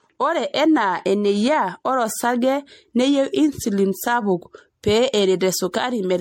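Across the whole speech clip there is generation loss. The sound is swirly and hollow, with smeared consonant attacks and nothing above 16.5 kHz. It is likely the result of repeated lossy re-encoding, around five passes, with a character that fits MP3 at about 64 kbit/s. Each pass quantises again on a shifted frame grid, so the holes and noise accumulate, leaving the sound more degraded than a single encode at that rate would explain.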